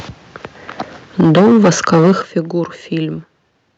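From 1.19 s to 2.12 s the speech is hit by microphone overload, likely from an input level set about 11 dB too hot. Roughly a fifth of the samples are flattened against the converter's ceiling, giving the loudest syllables a harsh, crackling edge. The waveform shows squared-off tops, and the spectrogram shows smeared broadband distortion above the speech harmonics.

The microphone volume is stepped down three times: at 1.21 s by about 4 dB, at 2.22 s by about 11 dB, and at 3.24 s by about 3 dB. Each is likely the call software's automatic gain control reacting to a microphone it found too loud or clipping. Voice and background drop together, abruptly. The waveform envelope shrinks in a clean step, and the spectrogram dims uniformly across the band, which ends near 8 kHz from the call codec.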